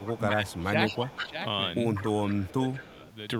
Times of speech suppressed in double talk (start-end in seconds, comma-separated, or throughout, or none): 0.00-1.36, 2.11-3.01